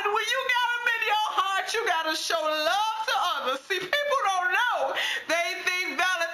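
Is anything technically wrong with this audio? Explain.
Yes, throughout the clip there is imaging from linear upsampling. The rate was raised by joining samples with straight lines, which fits a 16 kHz source converted to 44.1 kHz. The top is dulled, and a mirrored copy between 8 kHz and 16 kHz, roughly 25 dB down, adds a faint metallic shimmer to the sound.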